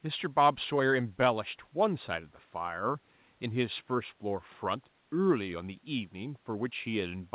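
Speech with no technical faults, its content ending at 4 kHz as expected of a narrowband call path of the G.711 mu-law kind.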